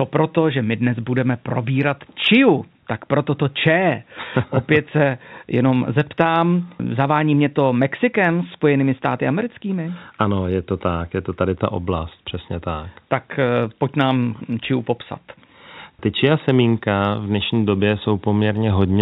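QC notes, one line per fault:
Nothing stood out on listening to this speech, which carries the narrow telephone band of G.711 coding.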